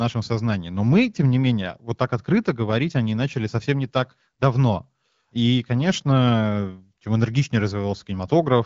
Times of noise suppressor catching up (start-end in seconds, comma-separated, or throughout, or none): none